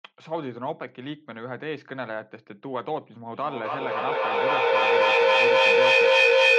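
Feedback echo between two devices from 3.33 s to the end of the speech: a second device's playback is recaptured about every 0.3 s, piling up to about 12 dB over the speech.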